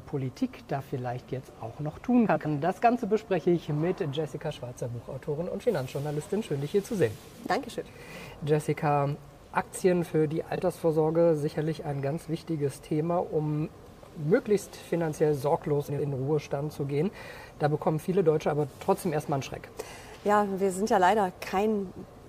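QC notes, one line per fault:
2.26–2.46 s, 10.55–10.60 s and 15.89–16.08 s: frames out of order. In each stretch, two adjacent blocks of audio play with their positions exchanged. The blocks are about 93 ms at the first and third points, which fits four frames each, and about 23 ms at the second, which fits a single frame. Playing the later block first breaks continuity at the three joins. This makes a brief garbled flutter, but no audio is lost.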